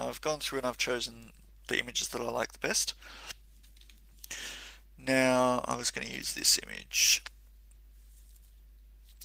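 No technical fault can be heard anywhere in the recording: the level stays steady with no breaks, distortion, or added noise in the signal path.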